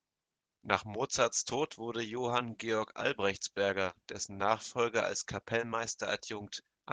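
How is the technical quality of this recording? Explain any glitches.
The recording carries plainly audible Opus voice compression from start to finish, so the speech is clearly degraded by low-bitrate coding.

Opus voice compression runs throughout the clip. The lower band is built by a linear-prediction speech coder with only coarse detail for the excitation, and a thin layer adds the upper band. The result is speech that sounds hoarse and slightly robotic. The treble is still present, which points to fullband hybrid coding at around 16 kbps. Unlike MP3-style damage, which sounds swirly and watery in the highs and muffles the top, this fault is roughness in the voice itself.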